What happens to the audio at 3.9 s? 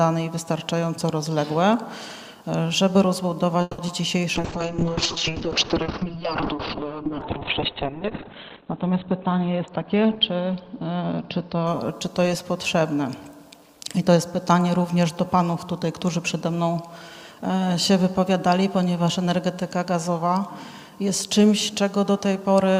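Short concealed packet loss occurs from 3.87 to 3.89 s. About 10 ms never arrived, so the decoder extended the preceding sound. It leaves a brief smear or wobble.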